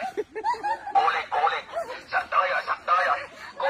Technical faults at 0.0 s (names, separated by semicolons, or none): none